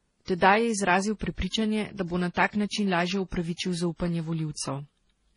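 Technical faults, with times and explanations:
Throughout, transcoding between lossy codecs: nothing sounds above 10.6 kHz, and two distinct sets of coding artefacts are heard layered together. This fits a low-bitrate HE-AAC encode likely re-encoded to MP3, the second codec wasting bits on the first's smearing while adding its own.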